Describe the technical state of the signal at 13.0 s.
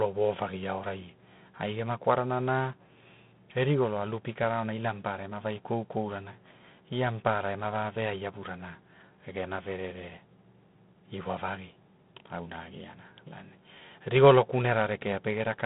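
At 13.0 s the speech carries G.726 ADPCM damage, present throughout the clip. Each sample is coded as only a few bits of difference from an adaptive prediction, and the coarse quantising leaves a harsh, rasping hiss that rises and falls with the speech level, which fits the 24 kbit/s mode. The line band runs from 150 Hz to 3.6 kHz. On a spectrogram, energy stops sharply by 3.8 kHz, with grainy noise filling the band under each syllable.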